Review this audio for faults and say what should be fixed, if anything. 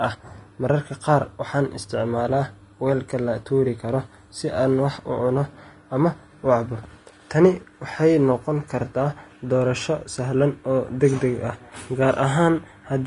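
Throughout the speech, the treble sounds hissy and grainy. Consonants lose their crisp edges, and tones have a rough texture. Nothing is heard above about 10.6 kHz. The likely cause is Vorbis compression at a low quality setting, which fits a bitrate near 32 kbps. At that rate the encoder drops the top of the spectrum. It quantises the remaining treble so coarsely that fine detail turns into noise. Encode from the original at a higher Vorbis quality, or deliver an uncompressed master.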